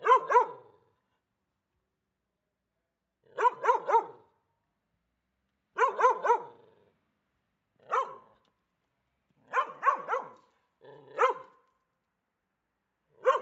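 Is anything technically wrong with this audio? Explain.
No, nothing stood out as a technical problem on listening.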